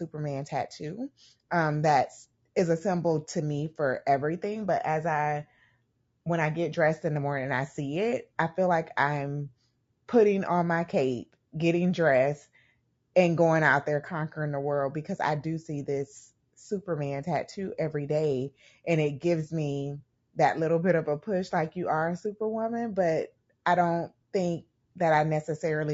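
Speech with low-delay AAC compression throughout, rough and grainy, likely AAC-ELD at roughly 32 kbps; a spectrogram shows blurred harmonics with noise filling the gaps between them.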